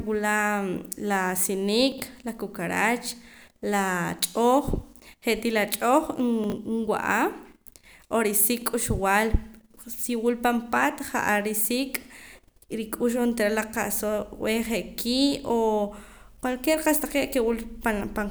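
At 1.92 to 2.0 s, and again at 6.44 to 6.52 s, you get chunks out of order: a 20 ms slice turns up three chunks late, so the speech briefly scrambles.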